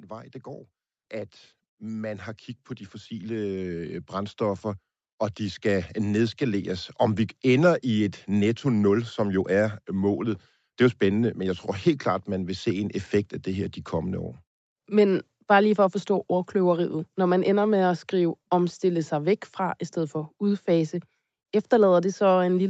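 Automatic gain rising from 0.1 to 6.98 s in this speech clip: the gain control, hearing a quiet input, gradually lifts the level by about 15 dB, swelling voice and background together, while the call path's band limit at 8 kHz is present throughout.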